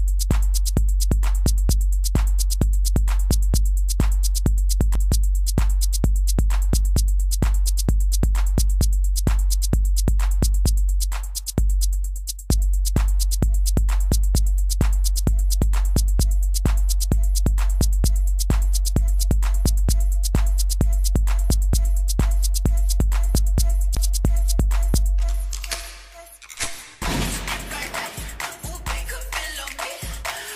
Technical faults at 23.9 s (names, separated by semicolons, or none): CD skip